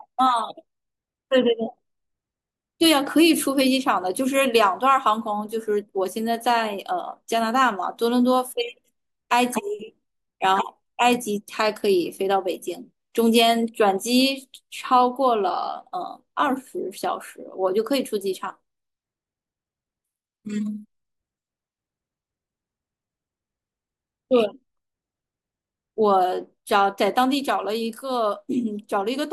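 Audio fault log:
No faults heard anywhere in this speech recording.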